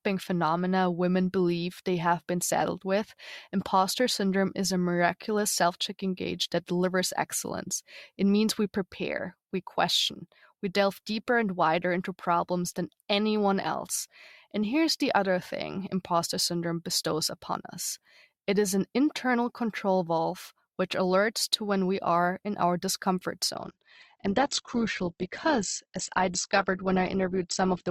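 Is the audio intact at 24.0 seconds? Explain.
No. From 23.55 s, right after "are in our discomfort", to the end of the clip, the speech is an adaptive stream at a lower bitrate: a slowing connection pushed the player onto a cheaper encoding. Content above 8.2 kHz vanishes and codec artefacts rise, which fits a step from roughly 64 to 12 kbit/s Opus. Unlike a dropout or packet loss, the change is an abrupt quality switch with no gap or silence.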